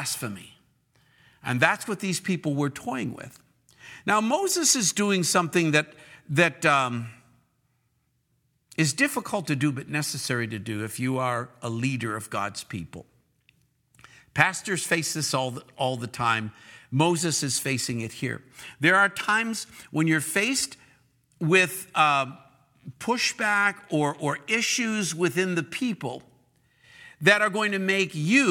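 No technical faults can be heard anywhere in the recording, as the speech signal stays continuous and intact throughout.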